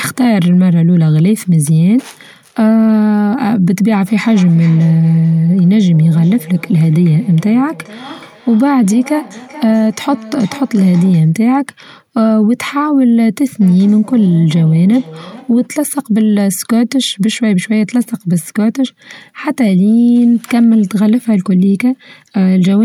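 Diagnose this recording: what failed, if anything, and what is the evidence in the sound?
Feedback echo between two devices is the failure, a call-processing problem. From 4.2 to 11.4 s and again from 13.61 to 15.75 s, the speech comes back roughly every 0.4 s, peaking at about 19 dB and about 21 dB below the direct speech. A second device in the room is replaying this microphone's signal into it, and neither echo canceller removes the other's output. On a spectrogram, faint delayed copies of each syllable trail behind it at even spacing.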